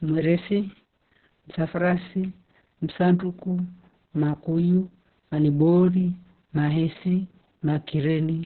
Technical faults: Opus voice compression

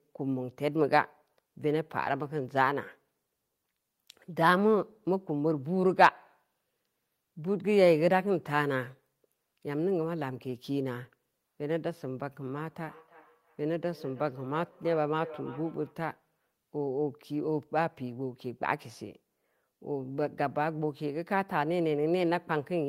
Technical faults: feedback echo between two devices

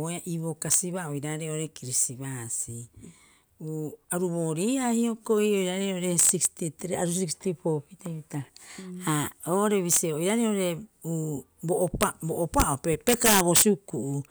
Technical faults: integer overflow

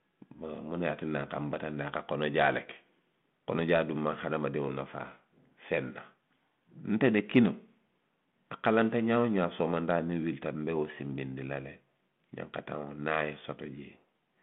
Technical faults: none

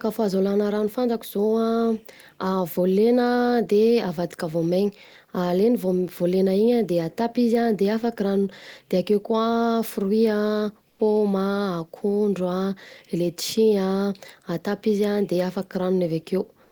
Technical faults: comfort noise in place of the background

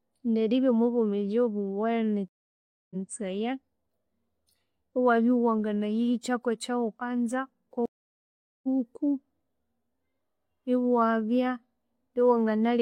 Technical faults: stream reconnect

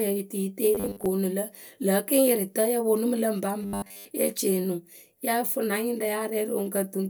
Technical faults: robotic sound from repeated short buffers

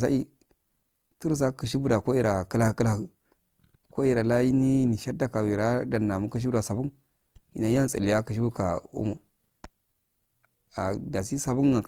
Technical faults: Opus compression

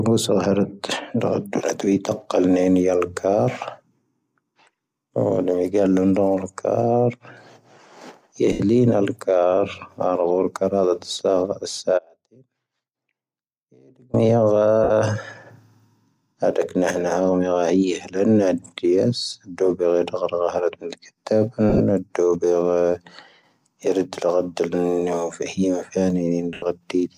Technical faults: lost LE Audio frames; audio dropout to a faint residue

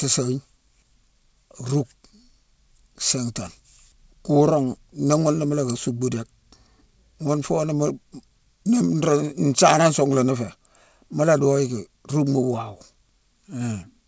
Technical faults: none

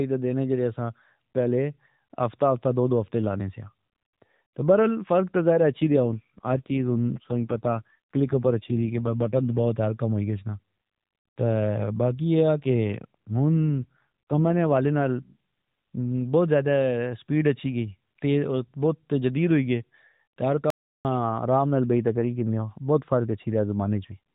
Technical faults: AMR rate drop; audio dropout to silence

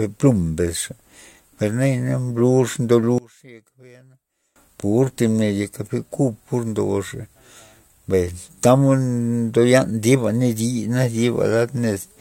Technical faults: one channel inverted

